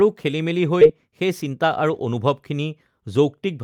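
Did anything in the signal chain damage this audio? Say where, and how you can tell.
Yes. There's a skip ahead at about 0.81 to 0.83 s, in the network and jitter buffer stage. The speech jumps straight forward with no gap or fill, and roughly 0.4 s of audio is gone. A stretch of audio was dropped, in transit or by the buffer, while later audio was already queued.

Right after that, from 1.07 to 2.14 s, there's a jitter buffer speed-up. The speech runs about 7% fast at unchanged pitch and sounds a bit hurried. The receiver was trimming tiny pitch-period slices, around a tenth of a second in total, to shrink its backlog.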